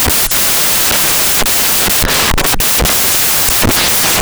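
A speech recording whose samples are built from the wrong bytes for its entire length: each sample's bytes are misassembled, so the rapidly changing low bits become the large part of every value, giving loud, harsh broadband noise that is close to white on loud sounds. A spectrogram shows dense broadband energy filling all frequencies, and the waveform looks like a solid, clipped-looking block.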